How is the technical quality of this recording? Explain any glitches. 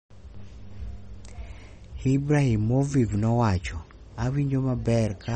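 The technical quality is noticeably degraded by compression artefacts throughout. From start to finish the speech has a watery, swirly quality, likely from MP3 compression at a low bitrate, something near 38 kbps. Starved of bits, the encoder discards treble and weak spectral detail. A spectrogram shows a hard ceiling at 8.4 kHz, with flickering holes below it.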